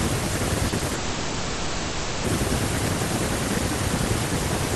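From 0.69 to 0.92 s the speech turns choppy, the sign of repeated packet loss (robotic sound). Within this quarter second, a handful of short holes, none longer than about 30 ms, are each patched by stretching the preceding sound, so roughly 30 percent of the span is synthetic fill. What separates this from a single long dropout is the rapid alternation: real speech keeps breaking through between the patches, giving a stuttering, robotic texture rather than one continuous smear.

Almost immediately after, from 0.94 to 2.25 s, the speech is replaced for about 1.3 s by a continuous extension of the last sound, a buzz or hiss that fades but never falls to silence. This is most likely a long network dropout, with nothing new arriving and the receiver filling the whole gap. Unlike the earlier choppiness, no genuine speech returns during the stretch. When audio resumes at 2.25 s, that 1.3 s of content is simply gone.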